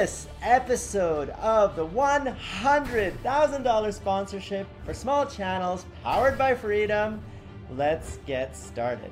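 No technical faults are audible anywhere in the clip.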